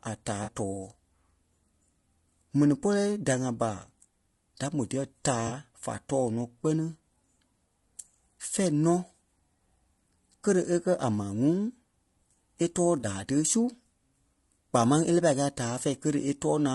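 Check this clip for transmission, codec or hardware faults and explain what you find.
Two faults are audible in this speech clip: a constant codec roughness throughout, and three brief concealed dropouts.

Low-delay AAC compression is present across the whole clip. The voice sounds rough and grainy, with noise filling the gaps between pitch harmonics and a thin, synthetic-sounding top band. The likely cause is AAC-ELD coding at a low rate, around 32 kbps. Its very short frames resolve harmonics poorly and leave too few bits. Unlike packet loss, this damage is steady rather than appearing in patches.

AAC frame loss with concealment occurs at 0.43–0.49 s, 5.47–5.53 s and 12.99–13.05 s, each gap about 40 ms long. That fits a couple of consecutive lost frames. At each point the decoder rebuilt the missing audio from the last good spectrum, so the sound briefly smears into a noisy, phasey patch rather than cutting to silence. 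The losses are too short for a fade-out. That makes them distinct from the constant codec grain, and from clicks or hard dropouts.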